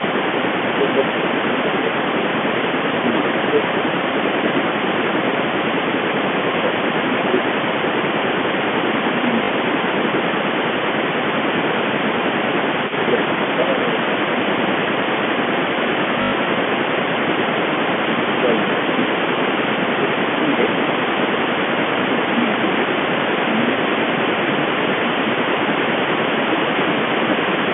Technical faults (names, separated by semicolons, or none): speech suppressed in double talk; echo leak; packet loss with last packet repeated